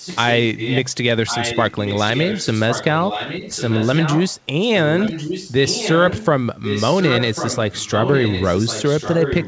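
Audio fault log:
0.0–0.36, 0.56–0.81, 1.26–2.85, 3.01–4.39, 4.62–4.68, 4.96–6.25 and 6.62–9.47 s: echo leak. The speech comes back about 1.1 s late, mostly about 10 dB under, barely there at 4.62, and about 5 dB under from 6.62. It's likely a loudspeaker's echo slipping past the far side's canceller.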